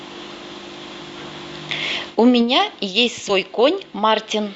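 Speech with compressed frames skipped at 3.29–3.32 s. Roughly 70 ms of audio, a few 20 ms frames, vanishes, leaving a sudden spectrogram discontinuity.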